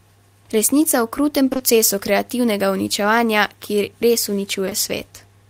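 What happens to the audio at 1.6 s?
Right after "o krutem", from 1.49 to 1.61 s, the audio goes through short concealed packet loss three times in a row, at 1.49, 1.53 and 1.57 s, each event spanning about 40 ms. Each time 20 ms of audio failed to reach the decoder in time, and the receiver extrapolated the preceding sound and then cross-faded back into real audio. The result is a smeared, wobbly stretch of about 0.12 s just before "kreativnega uničevanja".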